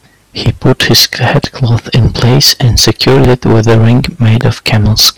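Hard clipping runs through the whole speech clip. The signal reaches the clipping stage about 20 dB too hot, so its peaks are sheared flat. Roughly a sixth of all samples hit the ceiling. With overload this deep, the flat tops throw harmonics high up the spectrum. Every loud syllable carries a harsh, buzzing fuzz rather than occasional crackle.

A loud pop lands at 0.46 to 0.48 s, about 10 dB above the speech. Further single pops follow at 1.44 to 1.47 s and 3.25 to 3.27 s, each about 20 dB above it. A last one comes at 4.41 to 4.43 s, about 15 dB up. Each is a sharp, brief crack lasting a couple of hundredths of a second. The speech continues beneath it. The likely cause is an electrical pulse, such as a switch, static discharge or driver glitch, added to the signal path.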